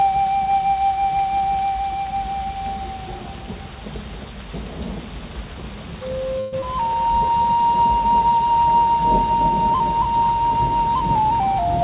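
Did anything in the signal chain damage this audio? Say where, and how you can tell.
Yes. The damage happened in call processing, at the network and jitter-buffer stage. The audio is band-limited with nothing above 4 kHz, which fits a G.711 A-law call path at 64 kbps.

Call audio freeze, 6.40 to 6.54 s. The last sound carries on as a fading buzz or hiss for 124 ms. Then the audio resumes exactly where it stopped, so nothing is lost. The likely cause is packets held up in transit until the jitter buffer ran dry. The receiver padded the gap, and the delay grew by 124 ms.

Skip ahead, 6.60 to 6.64 s. Just after the freeze, playback jumps forward. Around 70 ms of audio is missing. The two sides are stitched together with only 15 ms of fill. A stretch of audio was dropped while later audio was already queued. That clawed back roughly 70 ms of delay.

Jitter buffer slow-down, 7.06 to 7.68 s. 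The sound drags at 89 percent speed, but the pitch holds. The receiver repeated single pitch periods over and over to rebuild its reserve. It added 77 ms in total.

Jitter buffer speed-up, 11.23 to 11.78 s. Here the audio hurries at 108 percent speed, again at unchanged pitch. The buffer held more than its target. It trimmed short pitch-period pieces in quick succession, removing about 50 ms. The result is a rushed rhythm near the end.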